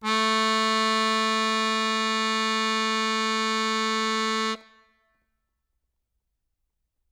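Listening through this piece of music, nothing stood out as a technical problem at any point.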